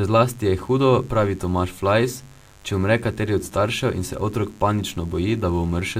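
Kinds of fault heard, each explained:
Mains buzz, throughout the clip: a steady, raspy buzz sits under the speech from start to finish, well below the speech level but always there in the pauses. It comes from the 50 Hz power supply. Something like a dimmer, a rectifier or a missing shield couples sharp switching spikes into the signal twice per mains cycle, so the buzz carries a dense row of 50 Hz harmonics reaching several kHz rather than a smooth low hum.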